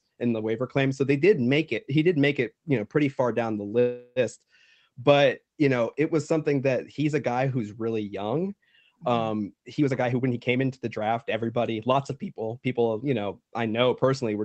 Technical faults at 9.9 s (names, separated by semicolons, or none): jitter buffer speed-up